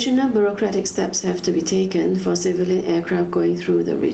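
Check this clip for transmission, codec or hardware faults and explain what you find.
One fault runs through the whole clip: gain pumping. The level swings by around 10 dB. The likely cause is input gain set far too high, with a fast limiter or compressor clamping down on each peak and then letting go. The speech itself sounds squashed and flattened in dynamics. What separates this from a noise gate is that the background never drops out. It also differs from slow automatic gain drift, because the movement follows each loud sound within a fraction of a second rather than wandering over several seconds. Nothing reaches above about 8 kHz, which fits the call's microphone filtering and an Opus codec running at roughly 24 kbps. The steady room noise sits about 39 dB below the speech.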